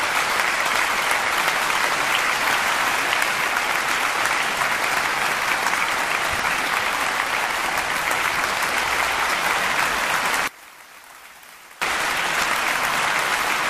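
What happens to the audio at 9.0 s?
Nothing goes wrong at 9.0 s; the audio carries on intact through that moment.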